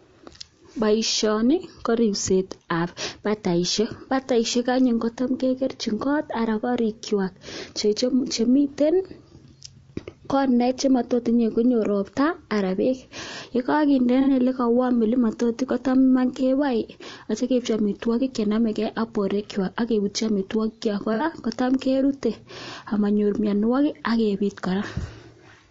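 From the start, the speech sounds rough and grainy. Noise fills the gaps between the pitch harmonics, and the top band sounds thin and synthetic. This is likely low-delay AAC compression, as used for video calls. Its short frames resolve harmonics poorly. The damage fits a low bitrate near 32 kbps.

At 14.21 s, about 60 ms of audio drops out, up to 14.29 s. It happens again from 21.14 to 21.23 s, and for about 30 ms at 23.96 s. This is AAC frame loss with concealment. The decoder rebuilds missing frames from the last good spectrum. Each gap sounds like a brief smeared, noisy patch.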